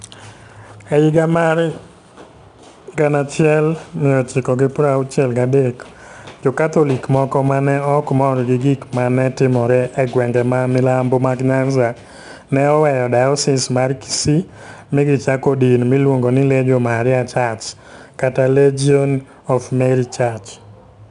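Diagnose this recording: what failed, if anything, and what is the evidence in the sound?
The codec stage failed. The whole speech clip carries 4-bit ADPCM compression, and the damage is plainly audible. Each sample is coded as a small step from a predicted value, with an adapting step size. The coding error rides along with the signal as a gritty hiss on louder passages, with roughness on sharp onsets where the step lags. Nothing is present above 10.6 kHz. That points to a sample rate near 22 kHz and a bitrate around 89 kbps.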